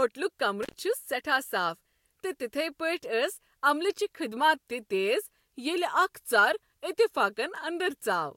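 At 0.63 s an intermittent contact breaks the speech for about 85 ms. A loose connection opened briefly. The sound drops out, with crackle at both edges and hiss while it is open.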